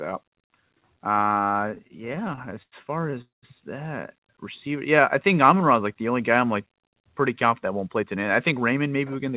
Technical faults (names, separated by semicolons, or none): repeated stalls (stutter); call audio freeze; jitter buffer slow-down; jitter buffer speed-up